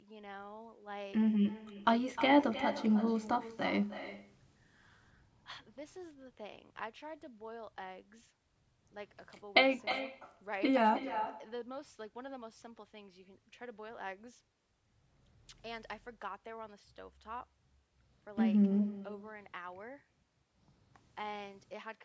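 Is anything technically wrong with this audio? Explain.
Yes. An echo with no canceller runs through the whole clip. The far end plays the call on a loudspeaker and its microphone sends it straight back. Each phrase returns about a third of a second later as a thinner copy, roughly 12 dB quieter. The speech stops at 8 kHz, as expected from call microphone processing.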